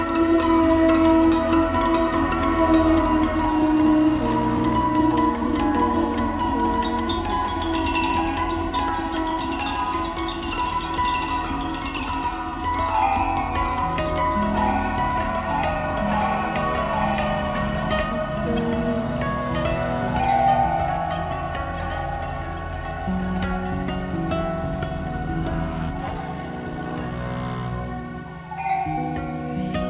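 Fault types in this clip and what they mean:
No faults present in this clip.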